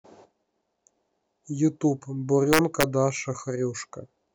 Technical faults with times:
2.53-2.83 integer overflow

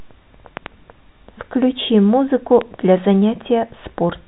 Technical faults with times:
0.57-0.68 loud pop
2.61-2.63 loud pop

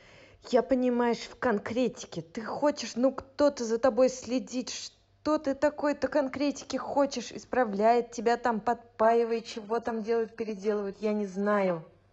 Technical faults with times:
9.01-12.13 adaptive stream at a lower bitrate

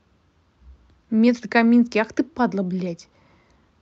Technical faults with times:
none

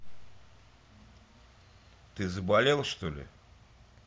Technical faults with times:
0.00-4.07 mains hum

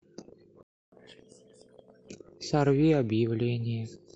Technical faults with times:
0.63-0.92 playback stall
0.92-2.09 catch-up at higher speed

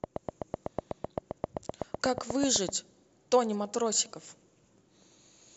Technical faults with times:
0.04-2.70 train of clicks

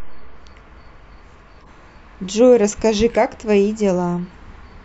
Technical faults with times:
1.62-1.67 corrupt frame decoded
3.11-3.16 corrupt frame decoded

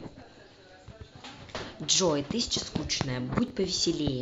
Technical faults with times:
3.48-3.50 chunks out of order

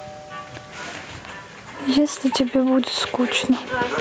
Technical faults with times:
0.00-4.00 gain pumping

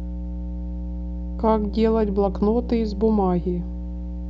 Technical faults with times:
0.00-4.29 mains hum

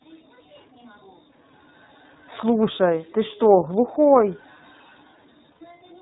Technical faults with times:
0.00-6.02 iLBC codec
5.52-5.62 lost iLBC frames

